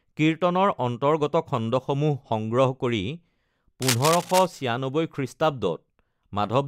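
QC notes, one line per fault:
3.82 to 4.46 s: cable scratch noise. A dense, uneven rustling and scratching sits over the speech for about 0.64 s, only slightly quieter than the speech itself. A worn cable or connector being moved is the likely cause. Its contact resistance flickers and injects bursts of noise.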